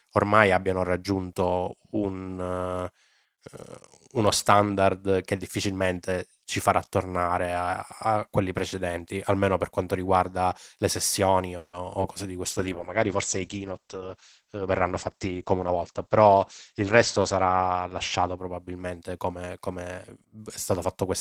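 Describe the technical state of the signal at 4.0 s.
At 4.0 s the speech is intact, with no dropout, glitch or distortion, only the steady coding character and the top end limited to about 12 kHz that the Opus call path imposes throughout.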